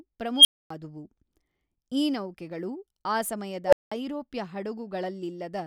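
At 0.36 s an unstable filter sets off a tone near 3 kHz that swells over about 86 ms, clips, then drops into 255 ms of silence. After "ಈ ನೌಕೆಗಳು ಆ", at 3.65 s, a second runaway builds near 500 Hz within 71 ms, followed by 190 ms of silence. Each time, recursive feedback grew without bound until overflow and reset.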